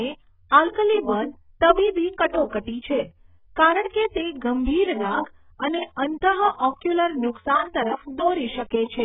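AAC compression damage runs throughout this speech clip, with nothing above about 3.8 kHz and a dull, smeared, warbling texture. The likely cause is AAC-LC coding at a very low bitrate, around 8 kbps, which cuts the upper band and quantises the rest coarsely.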